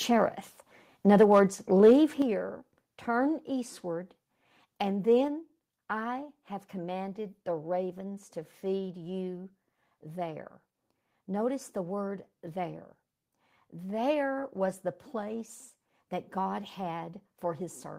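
From 1.09 to 1.4 s the loudest speech peaks turn harsh and crackly, likely microphone overload: input about 3 dB too hot, flattening a small share of waveform tops and smearing broadband energy upward on the spectrogram. At 1.23, 2.22 and 5.28 s, speech and background drop suddenly by about 2, 7 and 3 dB, likely the microphone volume stepped down by the call software, seen as abrupt envelope steps.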